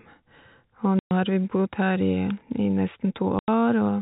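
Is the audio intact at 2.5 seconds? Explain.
Yes, at 2.5 seconds the speech runs on without any dropout, click or glitch, carried cleanly through its G.711 telephone coding.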